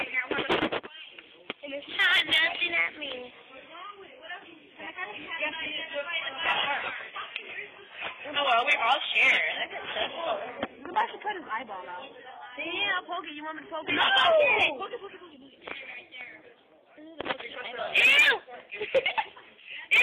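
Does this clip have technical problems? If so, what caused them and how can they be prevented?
Yes. From 3.31 to 15.31 s an adaptive stream at a lower bitrate plays: the connection slowed, so the player switched without a gap to a much leaner encoding, consistent with HE-AAC near 12 kbit/s. The treble turns synthetic, and a spectrogram shows a flat ceiling at 11.1 kHz for that stretch. A steadier connection or a larger playback buffer prevents the switch.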